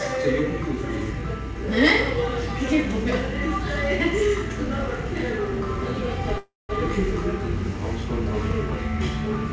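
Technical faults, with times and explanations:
6.38–6.71 s, call audio freeze: packets were likely delayed in transit, emptying the jitter buffer, so the receiver carried the last sound on as a fading buzz that falls to silence for about 200 ms. The sound then resumes where it stopped, with nothing lost, but 311 ms later.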